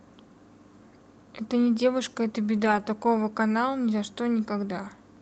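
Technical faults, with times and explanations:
2.55–2.81 s, lost packets rebuilt from error correction: a short stretch turns rougher and noisier but never actually drops out, since each next packet carried a low-bitrate backup copy the Opus decoder played instead. About 140 ms got patched, which fits seven lost packets.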